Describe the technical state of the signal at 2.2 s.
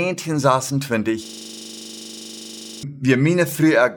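At 2.2 s the signal is inside a system hang loop running from 1.25 to 2.83 s. The playback system froze while the sound hardware kept cycling its ring buffer, so one 40 ms slice of the speech repeats exactly, about 39 times, which points to a buffer of roughly that length. At 25 repeats per second the result is a rigid, mechanical stutter-buzz with no forward movement in the speech until playback resumes.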